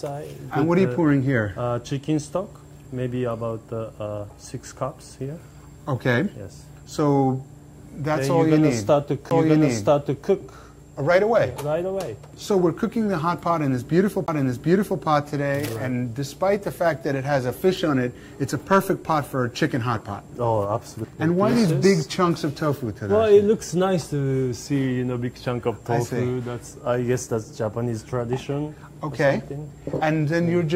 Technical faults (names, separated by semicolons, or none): CD skip